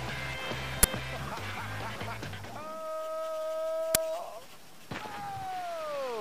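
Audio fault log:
0.83 s and 3.95 s, uninitialised buffer: at each time a block was played before audio was written to it, so leftover memory came out as samples. The blocks last 11.6 ms and 5.8 ms, which fits 512-sample and 256-sample buffers. Each appears as a short broadband click, a thin vertical stripe on a spectrogram, and a patch of erratic samples unrelated to the surrounding waveform.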